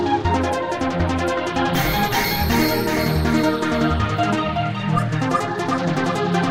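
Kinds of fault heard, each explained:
There are no kinds of fault heard in this audio.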